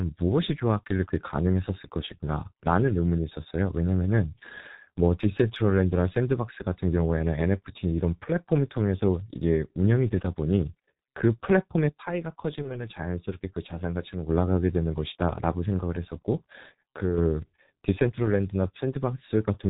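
Speech runs through the whole clip with the narrow, muffled, hoarse quality of the G.723.1 codec. Nothing above 4 kHz survives, and consonants smear because the coarse 30 ms framing and slowly updated voice model cannot follow quick articulation. The damage is heavy, consistent with a rate around 6 kbit/s. This sounds different from simple low-pass filtering, which would dull the sound without adding the roughness and the blurring of each consonant.

From 11.89 to 14.29 s, and again from 17.02 to 17.18 s, the level drops abruptly by about 6 dB and then recovers just as abruptly. The timbre stays the same during these dips. That combination points to one channel dropping out, likely a lost stereo channel before a mono fold-down, with only the shared content remaining. A gain ride or fade would ramp smoothly, and a codec fault would change the tone as well as the level.

Inside the first dip, from 12.62 to 12.71 s, there is VoIP packet loss concealed by the speech codec. 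The decoder filled the gap by extending its last pitch and filter into a brief buzzy tone or coloured noise that fades. The gap matches a single lost 30 ms frame. Because each frame builds on the previous one, the sound stays weakened for a few tens of milliseconds after the loss, so this is not a clean silent gap or a click.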